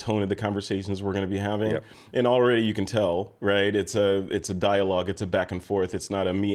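At 3.56 s, just after "already you can tell", the call's bandwidth estimate falls and the encoder is pushed onto a much smaller bit budget, a call bitrate drop that sounds consistent with a fall from around 48 kbps to roughly 18 kbps. With fewer bits the speech is coded more coarsely and the high frequencies are trimmed away, so the voice turns muffled, rough and watery. The starved rate holds for about 2.43 s and does not recover before the clip ends.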